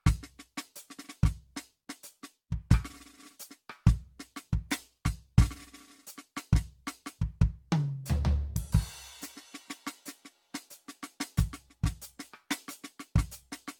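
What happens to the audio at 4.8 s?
At 4.8 s the music sounds swirly, smeared and hollow, with blurred attacks and nothing above 17 kHz. The same generation loss runs through the whole clip, so this moment shows it rather than beginning it. The likely cause is repeated lossy re-encoding, around seven passes, with a character that points to AAC-LC at 96 kbit/s. Each pass quantises again on a shifted frame grid, so noise and spectral holes accumulate beyond what one encode would leave.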